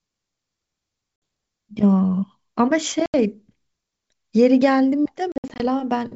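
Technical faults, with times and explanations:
1.16–1.22 s, packet loss on an ADPCM call: a 60 ms hard-edged silence, about three packets, shows as a flat gap in the waveform and a blank vertical band across the whole spectrogram, up to the 7 kHz top of the G.722 wideband coding. The decoder's predictor and step size no longer match the sender's, so the audio resumes slightly distorted and settles within tens of milliseconds.
3.06–3.15 s, packet loss on an ADPCM call: an 80 ms gap of about four packets, with the same clean dropout and a slightly distorted recovery.
5.32–5.66 s, packet loss on an ADPCM call: several gaps totalling 160 ms, the longest 60 ms, appear as a comb of blank stripes with slightly distorted speech after each.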